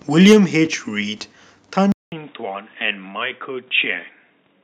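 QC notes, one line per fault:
0.20–0.37 s, microphone overload: the loudest peaks are flattened about 7 dB past the converter's limit, giving a harsh, crackling edge to those syllables. About 7% of samples were clipped, likely from input gain set too high for the converter.
0.33 s, microphone volume stepped down: during the distorted peak, sound and background both drop by about 4 dB in one abrupt step, likely the call software reacting to the clipping by lowering the device's input volume.
1.92 s to end, input switched to a poorer device: after a 200 ms silence the sound returns duller and boxier, with a narrower band. Level is about 5 dB lower, with a faint new noise floor around 50 dB down. This is likely a change to another microphone or headset profile.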